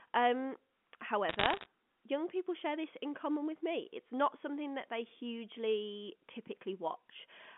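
Speech over a telephone-band line shows bit errors on a digital phone line from 1.29 to 1.66 s. Scattered single-sample ticks crackle at an error rate under one percent, while the speech itself stays intact, unlike dropouts or clipping.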